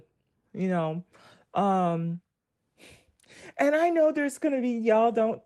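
Speech, with no audible faults.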